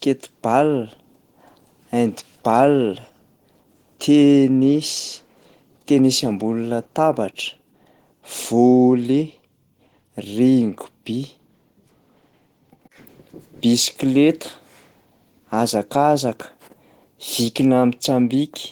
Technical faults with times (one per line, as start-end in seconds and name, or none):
0.00-18.71 Opus voice compression